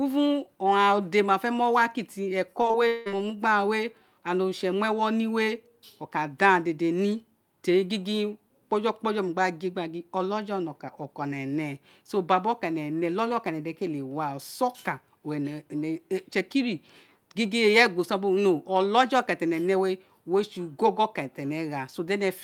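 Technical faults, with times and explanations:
2.61–3.08 s, repeated packet loss (robotic sound): the speech turns choppy, with pieces dropping out. Several holes open in quick succession, the longest about 181 ms. Each is bridged by stretching the last received sound, so roughly 240 ms of real audio is replaced with about 240 ms of repeated material, covering about half of this half-second stretch and giving it a robotic character.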